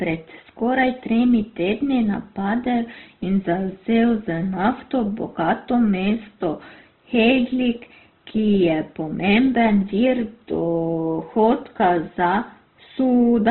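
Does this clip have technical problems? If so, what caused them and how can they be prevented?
Yes. All the way through, the speech has nothing above 4.2 kHz and sounds rough and grainy. That's likely heavy Opus compression, in a way that fits its music mode at a very low rate around 12 kbps. Encoding at a higher bitrate would prevent it.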